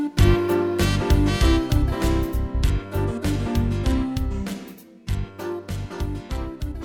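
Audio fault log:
No faults detected in playback.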